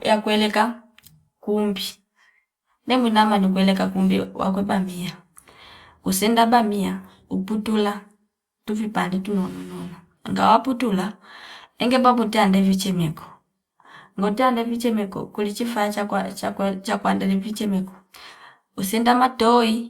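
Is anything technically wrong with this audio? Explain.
No, nothing technical stands out in this speech recording, so there's nothing here that needs fixing.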